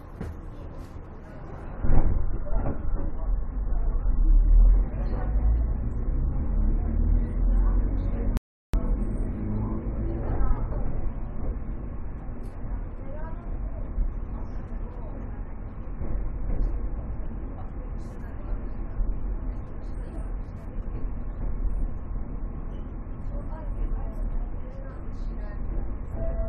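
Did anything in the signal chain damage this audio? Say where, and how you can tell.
Yes: a rebuffering stall at playback. The player ran dry at 8.37 s, leaving a flat 0.36 s gap in the waveform, then resumed exactly where it stopped.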